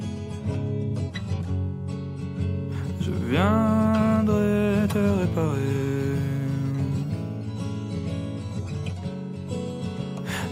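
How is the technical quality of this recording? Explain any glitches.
No glitches detected; the recording holds steady throughout with nothing to flag.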